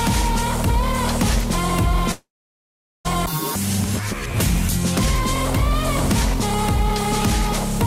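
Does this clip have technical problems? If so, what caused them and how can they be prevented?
Yes. From 2.11 s to 3.09 s there is a long network dropout. The sound before the gap is stretched into a fading buzz, then about 0.77 s of near silence follows. Audio resumes at 3.09 s, but roughly 0.6 s of content is gone for good. The timing also shifts by around a third of a second afterwards. This is likely a stalled network link that starved the receiver. A steadier connection with a deeper jitter buffer and packet redundancy would prevent it.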